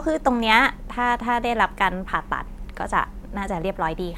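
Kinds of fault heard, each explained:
No technical faults can be heard in this speech recording. There is nothing to list for it.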